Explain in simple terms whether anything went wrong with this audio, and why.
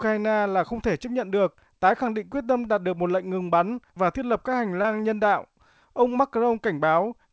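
Something did go wrong, once. Around 4.82 to 4.86 s, between "thiết lập các hành" and "nhân đạo", a scrap of the call about 20 ms long arrived too late for the decoder. That is short concealed packet loss: the receiver patched the hole by stretching the sound just before it, then faded back into the real audio. You hear it as a tiny smear or wobble at that spot. The call codec's usual cut-off above 8 kHz is present throughout.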